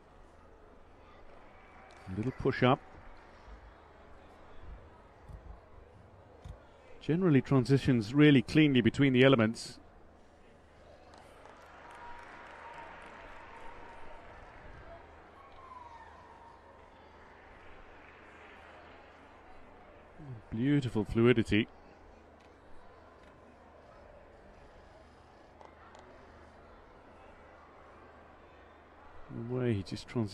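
There are no technical faults to describe in time order.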